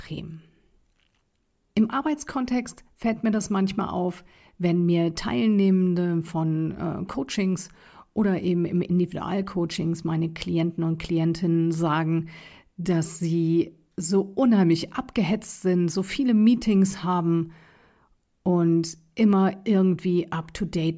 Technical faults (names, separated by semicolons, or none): none